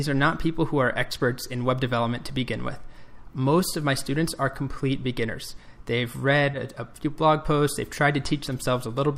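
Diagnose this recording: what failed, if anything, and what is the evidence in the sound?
Short concealed packet loss on the network: about 20 ms of audio arrived too late near 6.51 to 6.55 s, and the receiver extrapolated the preceding sound, leaving a brief smear.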